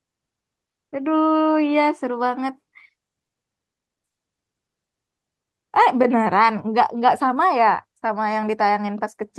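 Nothing stood out on listening to this speech recording, which carries the ordinary character of an Opus call path with its top end stopping at around 12 kHz.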